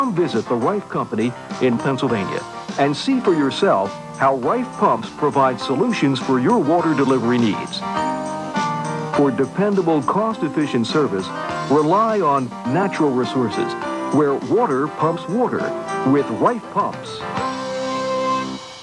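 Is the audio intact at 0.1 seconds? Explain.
Yes, the audio is intact at 0.1 seconds, with no fault at that moment.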